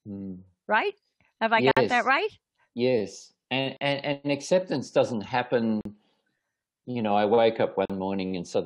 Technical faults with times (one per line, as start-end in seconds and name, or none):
1.71-1.77 gap at a join of encoded pieces
3.77-3.81 gap at a join of encoded pieces
5.81-5.85 gap at a join of encoded pieces
7.85-7.90 gap at a join of encoded pieces